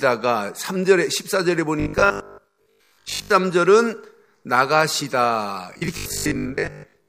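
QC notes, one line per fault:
1.8–3.32 s, robotic sound from repeated short buffers: likely audio arriving too seldom, so roughly 20 ms chunks loop over most of the stretch, forcing a rigid, metallic 50 Hz buzz onto the speech.
5.74–7.08 s, robotic sound from repeated short buffers: likely the same starved stream, repeating chunks over about half this span and imposing the same mechanical 50 Hz buzz.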